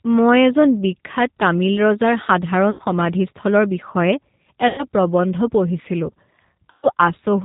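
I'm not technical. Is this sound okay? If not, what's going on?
No, not quite. The whole clip went through the G.729 codec, a squeezed-down phone-call format that drops everything above 4 kHz. That's why the speech sounds muffled, slightly rough and a bit robotic from start to finish.

There are also three moments of VoIP packet loss concealed by the speech codec, around 2.71–2.81 s, 4.68–4.87 s (just before "প্ৰবন্ধ পঢ়িছিলোঁ") and 6.71–6.88 s. Chunks of audio went missing, and the decoder padded the gaps by stretching the last sound into a fading buzzy tone or noise.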